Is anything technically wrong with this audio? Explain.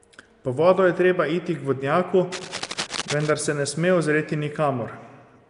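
Yes, two problems are audible in this speech clip.

Nellymoser compression, present throughout: the speech carries a rough, hissy halo and sounds smeared, as if heard underwater, with nothing at all above 10.6 kHz. The damage is plainly audible. This is likely the Nellymoser Asao codec, Flash's old microphone codec, at a rate that fits around 44 kbps. It codes short fixed blocks with a very small, fixed bit budget, so weaker bands get no bits and are filled with noise. That substitution produces the hiss and the blurred texture.

Cable scratch noise, from 2.32 to 3.32 s: for about a second, dense, uneven scratching and rustling bursts sit over the speech, roughly ten decibels below it. The likely cause is a worn cable, connector or control being moved. Its contact resistance jumps around rapidly as it shifts, injecting irregular noise bursts into the signal for as long as the movement lasts.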